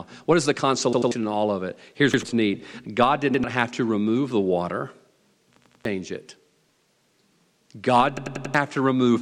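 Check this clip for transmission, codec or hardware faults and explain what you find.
The speech has a repeated buffer fault, heard five times. At 0.93 to 1.12 s, between "is the" and "in all of it", a 93 ms block plays twice more. At 2.14 to 2.23 s it plays once more, and again at 3.34 to 3.44 s just before "have to remove the". At 5.57 to 5.85 s it plays three extra times, and at 8.17 to 8.55 s four extra times.

Each time, fresh audio failed to reach the output in time, so the device replayed its last block. The 93 ms length fits a 4096-sample buffer. The result is a rhythmic stutter with a hard join at every repeat, and the sound that should have filled each gap is gone: roughly a tenth of a second per extra play, and about 0.4 s in the last event.

On a waveform, identical ~93 ms segments sit side by side. On a spectrogram, the same pattern is copied across like tiles, with a thin vertical broadband line at each join.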